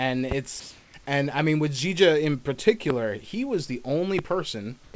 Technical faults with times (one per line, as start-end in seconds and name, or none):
0.31-0.34 loud pop
0.60-0.94 comfort noise in place of the background
2.90-2.93 loud pop
4.19-4.21 loud pop
4.84-4.94 comfort noise in place of the background